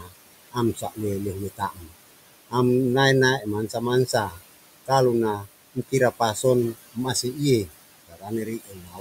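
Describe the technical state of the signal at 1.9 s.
At 1.9 s the speech sounds swallowed and faint, sitting in a stretch from 1.57 to 1.92 s where the sound sinks by as much as about 19 dB. This is speech cut by the noise suppressor: the processing mistook some of the softer speech energy for background noise and turned it down along with the noise, so roughly 300 ms of material in that span comes through weakened, with the quieter parts losing their presence.

Underneath, the same processing leaves noise suppressor artifacts. The background does not hold steady but dips away and then swells back beneath the voice. The suppressor works band by band, frame by frame, pulling down whatever it judges to be steady noise by about 20 dB, and here that includes the room noise, which sits about 14 dB below the speech.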